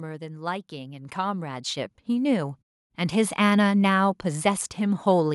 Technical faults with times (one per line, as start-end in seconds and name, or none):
0.69-3.67 automatic gain rising